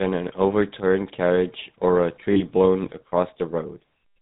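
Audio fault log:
Throughout: GSM full-rate codec, plainly audible buzzy, gravelly roughness and nothing above 4 kHz, consistent with 13 kbps pulse-excited vocal-tract coding.
2.32–2.43 s: lost GSM frames, about 40 ms of missing data concealed by repeating the last good frame, producing a brief rough, metallic ring.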